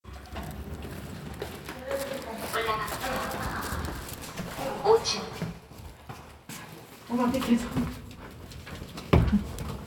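From 4.05 to 4.85 s the filter is restarted on every block, each block starting from silence, leaving a 200 Hz buzz of transients that tracks the sound's level.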